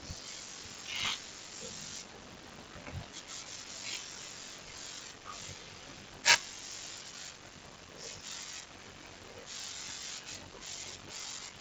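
A speech clip with a block size mismatch (padded) running throughout: each block arriving downstream is shorter than the block being read, and the shortfall is filled with silence. The resulting regular gaps produce a buzz at 46.9 Hz, which fits 1024-sample reads at 48 kHz. Playback runs at 0.861 times normal speed while pitch stays roughly unchanged. The G.722 coding path, here at 48 kbit/s, contributes light lower-band noise and little above about 7 kHz.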